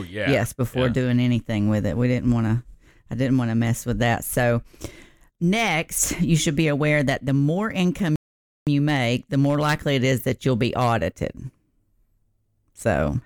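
At 8.16 s, after "that the more income", a playback stall silences the speech for 0.51 s, likely a data underrun, before it resumes at "you make the more".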